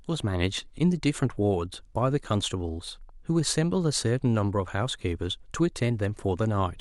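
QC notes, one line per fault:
No faults detected in this speech clip.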